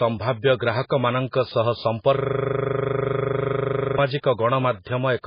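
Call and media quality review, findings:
Throughout: heavy watery, swirly smearing of speech; likely MP3 compression at a very low bitrate, around 16 kbps. Spectrogram: hard ceiling at 5 kHz, patchy bins flickering frame to frame.

2.17–3.98 s: system hang loop. The driver stalled while the ring buffer replayed one 40 ms slice about 45 times, giving a steady 25 Hz buzz. The waveform shows identical repeating blocks.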